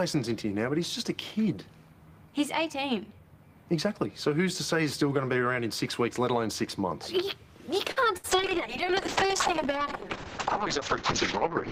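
At 7.91 s the audio stalls briefly. This is a short stall from a late packet. The next packet had not arrived on time, so the jitter buffer ran dry. The receiver held the last sound for about 49 ms until the data turned up. Playback then resumed where it left off, now 49 ms later than before. Nothing is lost. The sound simply hangs a little too long, with a faint buzz or dip.

At 8.04 s there is a short concealed packet loss. About 20 ms of audio never reached the decoder. The receiver covered the hole with roughly 8 ms of synthesized continuation, extending the last sound before blending back into real audio. The result is a quick smear or wobble.

From 8.17 to 8.26 s comes a burst of packet loss. Several packets in a row failed to arrive in time. The receiver filled about 65 ms by stretching the last sound and fading it down as the gap ran on. That comes across as a brief held buzz or a dying hiss. 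About 60 ms of the original audio is missing, and the sound jumps forward when it resumes.

At 8.30 s a call bitrate drop begins and lasts to the end. The bandwidth estimate fell, and the encoder went from 32 kbps down to 7 kbps. It held that low rate for about 3.4 s. Coding became much coarser. The audio bandwidth narrowed from 20 kHz to 8 kHz, so the top end is cut away. The sound turns muffled, rough or watery.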